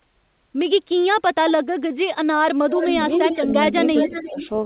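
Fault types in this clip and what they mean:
Speech suppressed in double talk: with both sides talking, the echo canceller likely mistook the talker for echo and turned it down. Brief dips at 1.94, 2.21, 3.91 and 4.28 s, up to about 25 dB, appear as notches in the waveform and faded spectrogram columns.
Echo leak: a copy of the speech trailing by 353 ms comes back, likely loudspeaker pickup the canceller missed. From 2.7, 3.33 and 3.9 s it sits about 5 to 15 dB down, a fainter shifted duplicate of the spectrogram pattern below 4 kHz.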